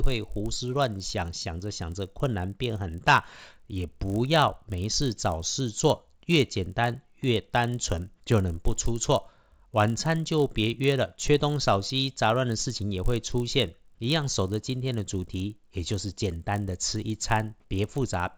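Speech runs throughout with a steady 50 Hz buzz riding on it, the signature of a resampler restarted on every block. Each 20 ms block was converted from 16 kHz to 48 kHz in isolation, leaving an error at every edge. Unlike mains hum, it vanishes whenever the signal stops.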